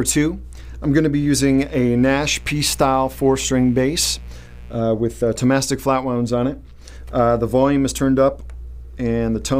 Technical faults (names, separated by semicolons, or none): mains buzz